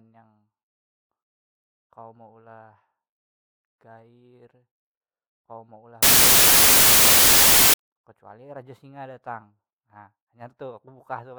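From 6.03 to 7.74 s, after "kawa meulah" and before "kecuali raja singa datang", samples built from the wrong bytes turn the speech into loud, harsh broadband noise and a full-band spectrogram smear.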